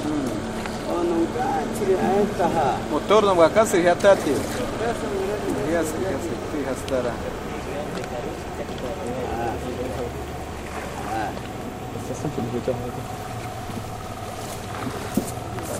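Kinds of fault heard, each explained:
No technical faults detected anywhere in this recording of sounds.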